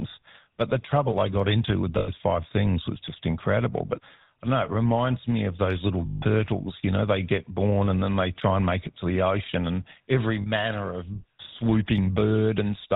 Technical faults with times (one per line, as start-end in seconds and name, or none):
0.00-12.96 GSM full-rate codec
1.98-2.10 lost GSM frames
6.06-6.23 lost GSM frames
10.42-10.47 lost GSM frames